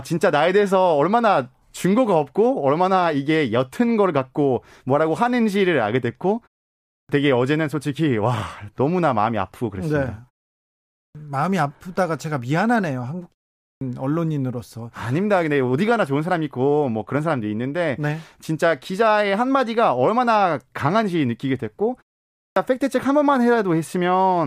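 Speech with a clipped start after a pause, four times. At 6.90, 10.96, 13.61 and 22.36 s, sound resumes abruptly after a gap of 0.51, 0.74, 0.35 and 0.42 s. Each time the first 190 to 200 ms is missing, so speech begins already underway. The output device drops into a sleep state during the quiet stretch. It then needs that long to wake and lock again, swallowing the opening sounds.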